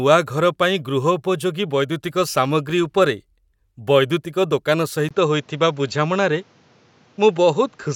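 At 5.09 s a 20 ms gap precedes speech empty above 7.6 kHz, with new noise about 35 dB down, likely input switched to a poorer device.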